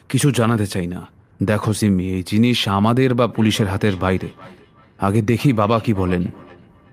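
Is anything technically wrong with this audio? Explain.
Yes. From 3.3 s to the end, at 6.9 s, there is feedback echo between two devices. Two devices in the same room seem to share one call. One plays back what the other's microphone sent, and that microphone picks it up again. Each device's echo canceller only removes its own playback, so the loop survives. The speech returns roughly every 0.4 s as a fainter, thinner copy. It peaks about 23 dB below the speech.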